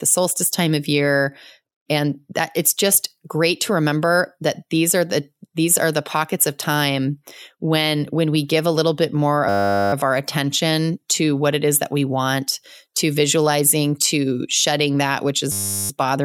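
At 9.49–9.93 s, after "a little bit more", and 15.52–15.9 s, after "shedding that which is", a system hang loop replays one 10 ms buffer, producing a steady 100 Hz buzz.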